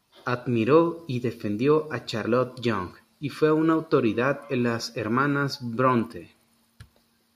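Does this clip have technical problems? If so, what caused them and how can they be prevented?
No, there are no technical problems in this speech clip. Because nothing went wrong, there is no cause to trace and nothing to prevent.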